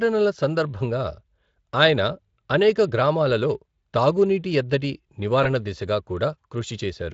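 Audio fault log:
5.43–5.50 s, VoIP packet loss concealed by the speech codec: one 20 ms frame is lost just after "అనేక గ్రామాలలో తాగునీటి ఎద్దడి", so the Speex decoder extends the preceding frame at falling gain, leaving a brief stretched, fading sound that persists until about 5.50 s.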